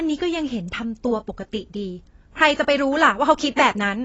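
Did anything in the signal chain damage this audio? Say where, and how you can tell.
Yes, and it's at the codec stage. The speech has nothing above 7.8 kHz from start to finish, so it sounds dull, and the sibilants come out smeared and fizzy, with that warbly texture in the sustained sounds. It's likely AAC compression. AAC-LC at a low rate drops its cut-off and starves the upper bands of bits, and damage this plain fits something around 24 kbps.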